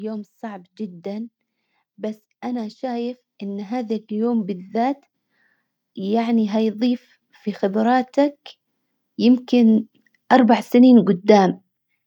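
From 1.96 to 5.02 s the level creeps up by about 6 dB, then again from 5.96 to 8.44 s by about 5 dB. That's automatic gain rising: the gain control judged the input too quiet and slowly turned itself up, so voice and background noise swell together.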